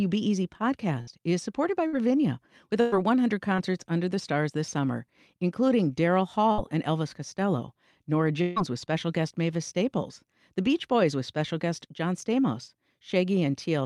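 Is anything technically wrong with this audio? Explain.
Yes. Speech drops out six times. Bursts of packet loss occur at 1.01 s, at 1.87 s just after "is supported by", at 2.81 s, at 6.52 s, and at 8.42 s just before "with special guest". They remove about 60, 60, 120, 60 and 140 ms. The receiver stretches the last sound into a held buzz or hiss that fades, then jumps ahead to later speech.

A short concealed packet loss at 3.56 s, just before "under the stars this", loses only 20 ms. It is bridged so quickly that it comes across as a brief smear rather than an audible fade.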